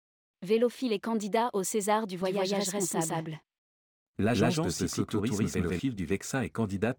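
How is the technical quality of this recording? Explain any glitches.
The recording has one clear glitch. From 2.2 s to 5.8 s the speech is heard twice: a doubled audio track, with a second full-band copy trailing about 150 ms behind at roughly equal loudness. It likely comes from the same signal being captured again through a slower path and mixed back in. Unlike a room echo or reverb, the copy has no decay or added colour, and it switches on and off abruptly.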